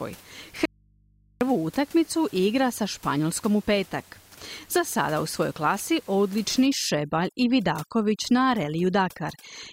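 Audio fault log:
0.65–1.41 s audio dropout to a faint residue: sound cuts abruptly for 0.76 s, leaving only hum about 35 dB down before "utakmicu igra sa", likely a lost signal on a still-live path.
6.66–9.72 s overdone noise removal: noise reduction set too strong shuts off bands near its noise estimate, so the background drops to twinkling near-silence and quiet parts of the voice go with them.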